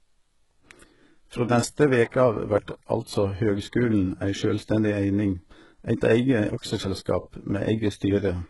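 A speech recording, most likely passed through heavy HE-AAC compression at a very low rate, consistent with roughly 12 kbps, where the upper spectrum is rebuilt by copying lower bands upward. The treble is synthetic and cuts off near 11.5 kHz, so sibilants sound gritty, metallic and lispy. A pre-echo from 2.10 to 2.14 s comes from the codec spreading quantisation noise across its transform block, so a short hiss runs about 36 ms ahead of a sharp attack, which sounds softened and smeared.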